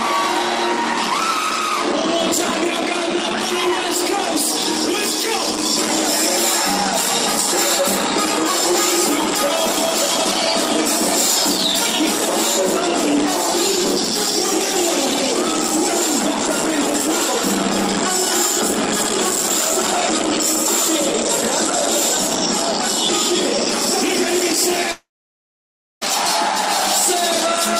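A long network dropout runs from 24.91 to 26.03 s. The sound breaks into a brief fading buzz or hiss, then 0.95 s of near silence, and resumes with 1.1 s missing, likely because packets stopped arriving and the receiver concealed the gap.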